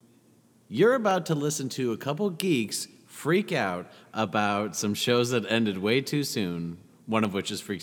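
A speech recording with two sharp clicks, at 1.11 s just before "to listen to a" and at 7.25 s right after "ended way too soon". Each is likely caused by dropped samples, a fraction of a millisecond missing, so the waveform jumps straight to a later value. On a waveform that shows as an abrupt step; on a spectrogram, as a thin vertical line spanning all frequencies at each moment.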